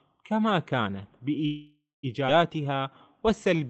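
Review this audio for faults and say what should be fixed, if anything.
From 1.45 to 2.06 s there is a call audio freeze. Packets were likely held up in transit, the jitter buffer ran dry, and the receiver filled about 0.58 s by extending the last sound, which thins to silence for roughly 0.18 s before the speech resumes where it left off. Nothing is lost, but the delay grows by the same amount. Prevention: give the buffer more headroom, or fix the network path causing the delay spikes.

Between 2.27 and 2.31 s the audio skips ahead. Around 0.4 s of speech was dropped, either in transit or by the jitter buffer when it overflowed, so the playout delay dropped back by about that much. The two sides of the cut are joined with only a tiny bridge, so the speech lurches forward. Prevention: drain excess delay gradually by time-compression instead of dropping whole stretches.

From 2.57 to 3.68 s there is a jitter buffer slow-down. 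The receiver repeated pitch periods and bits of pauses to rebuild its reserve, adding about 158 ms, so the speech plays at roughly 87% speed at unchanged pitch. Sounds are drawn out, all within the 8 kHz band of the Opus call path. Prevention: avoid emptying the buffer in the first place so it doesn't need to stretch speech to refill.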